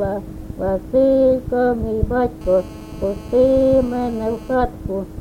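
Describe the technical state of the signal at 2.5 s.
Rectified 2G phone transmit bursts cause GSM phone buzz from 2.41 to 4.55 s: a steady, raspy 217 Hz buzz about 24 dB below the signal.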